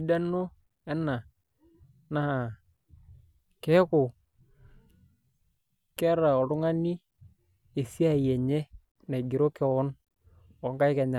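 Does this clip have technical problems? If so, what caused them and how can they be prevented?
No, this clip has no technical problems, so there is nothing to prevent.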